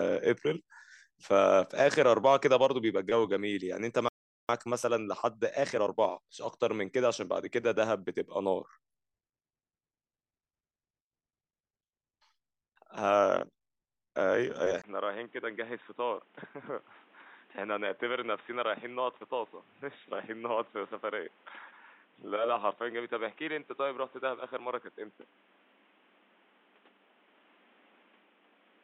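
At 4.09 s the speech just stops dead, mid-flow, and stays silent for about 0.4 s before picking up again at 4.49 s. That's a playback stall. The gap points to the player likely running dry of data or having its audio thread held up, so nothing reached the output until it recovered.

Right after the stall, from 4.49 s to 6.11 s, the speech comes out hurried, running at about 1.25 times normal speed while keeping its normal pitch. That's time-compressed catch-up: the player is burning off the backlog that built up during the stall by snipping out small slices and cross-fading across the joins.

At 14.82 s there's a tiny 20 ms dropout, and from then on, for the rest of the clip, the sound turns dull and boxy. The level sits about 5 dB lower, and a new noise floor appears, roughly 30 dB under the speech. That all points to the input being switched to a poorer device, likely a swap to a narrower-band mic or a headset's call profile partway through recording.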